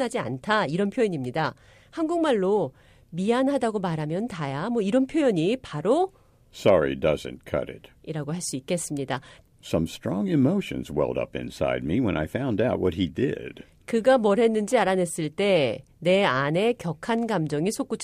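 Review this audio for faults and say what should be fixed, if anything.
No faults; nothing to fix.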